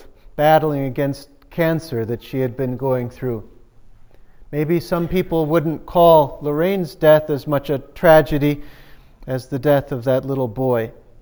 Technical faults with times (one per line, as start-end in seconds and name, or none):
0.00-11.22 imaging from sample-and-hold upsampling